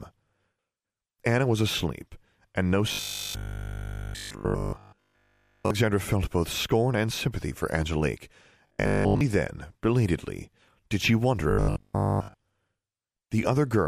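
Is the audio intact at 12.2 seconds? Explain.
No. At 12.2 seconds the speech is inside a stretch of robotic sound from repeated short buffers, running from 11.50 to 12.34 s. Fresh audio is likely arriving too slowly, so the same short slice is replayed again and again while the real signal is skipped. All of this span is repetition. The 50 Hz buzz points to a 20 ms slice. The voice becomes a rigid, metallic drone that only loosely tracks the speech.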